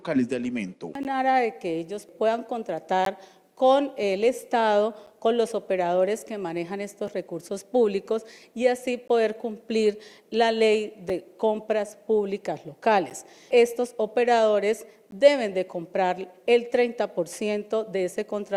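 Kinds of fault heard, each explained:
Gap between stream segments: the timestamps of consecutive segments, about 2 s long, don't quite meet, so the player inserts silence at each seam. Brief hard-edged dropouts of roughly 3 to 17 ms land at 1.03, 3.05, 5.06, 7.07, 9.08, 11.09, 13.10 and 15.11 s, with nothing missing around them. The waveform shows flat silent stretches with abrupt edges. The spectrogram shows thin empty vertical stripes spaced every two seconds.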